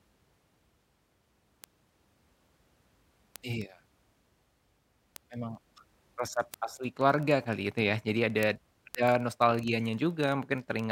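Word clock ticks run from 0.14 s to the end: a steady train of ticks about every 40 ms, around 300 in all. The receiving device's clock isn't locked to the sender's, which points to an offset of roughly 500 ppm, so it slips about one sample at each tick.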